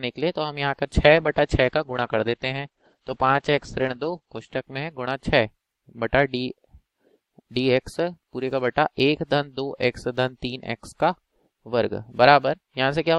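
At 1.08 s the audio goes through a call bitrate drop that lasts until about 6.79 s. The bandwidth estimate has collapsed, so the encoder is coding far more coarsely. The top end is shaved from around 20 kHz down to about 8 kHz, which makes everything muffled and a bit watery. It sits at its worst for roughly 3.1 s. That depth of degradation fits a fall from high-quality rates down to around 11 kbps.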